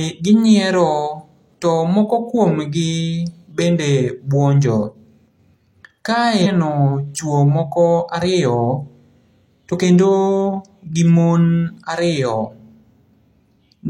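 At about 6.41 to 6.46 s, a stream segment was likely skipped when it failed to load, so the speech jumps abruptly ahead with a brief blip.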